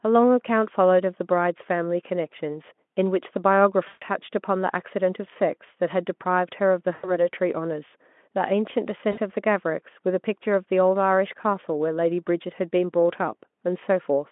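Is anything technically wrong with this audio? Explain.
Yes. VoIP packet loss concealed by the speech codec occurs at 3.87 to 4.04 s (about 140 ms lost), 6.95 to 7.27 s (about 80 ms), and 9.12 to 9.19 s (about 60 ms). The decoder fills each gap by extrapolating the last pitch and filter while lowering gain, so the speech smears into a fading buzzy tone or coloured noise, and it stays weak until recovery, beyond the gap itself. This happens over the Speex-coded telephone band of about 200 Hz to 3.4 kHz.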